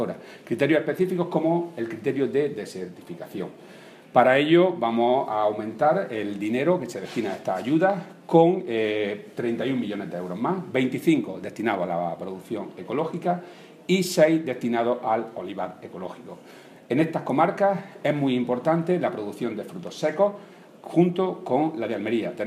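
Nothing in the signal points to a technical fault at any moment in the clip.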